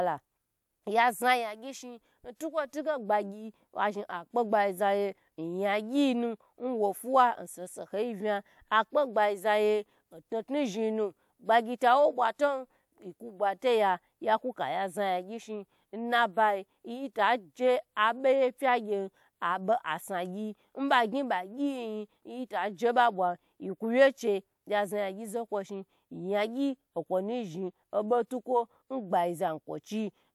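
No technical faults are audible anywhere in the speech recording.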